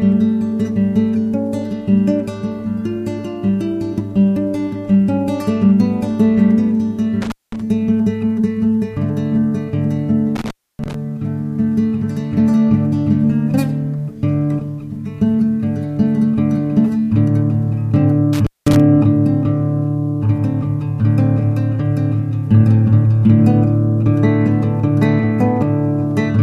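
Intermittent contact breaks the sound at 7.22–7.61 s, 10.36–10.94 s and 18.33–18.80 s as a loose connection opens for 205, 284 and 200 ms. Crackle at each edge and hiss through each gap set it apart from a clean digital dropout.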